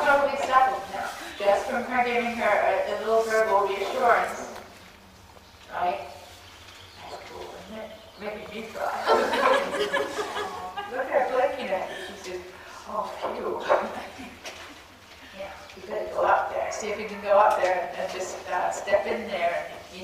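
Nothing goes wrong at any point in this clip, so there's really nothing to flag here.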